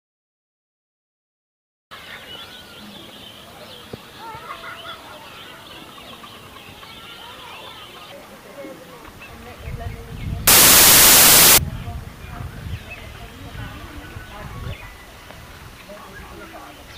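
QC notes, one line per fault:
10.47–11.58 s, samples built from the wrong bytes: the sound turns abruptly into loud, harsh broadband noise for about 1.1 s, because each sample's bytes are misassembled and the fast-changing low bits become its largest part.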